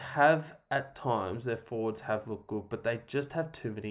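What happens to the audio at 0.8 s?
Nothing goes wrong at 0.8 s; the speech plays through that moment intact.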